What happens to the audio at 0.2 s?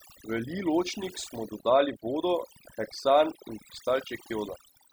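At 0.2 s, as throughout the whole clip, overdone noise removal is at work: the noise reducer is set too strong, cutting any frequency band close to its noise estimate, along with quieter parts of the speech. The background drops and breaks up into twinkling specks.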